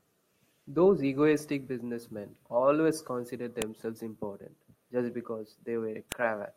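At 3.62 s and again at 6.12 s the speech is broken by a sharp, loud click, a file header played as audio. Each marks a join where a new WAV piece began with its header bytes intact, so that metadata was decoded as sample values.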